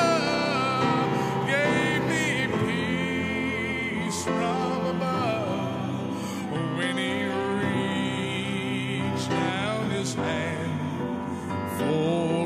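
No technical faults are audible anywhere in the recording.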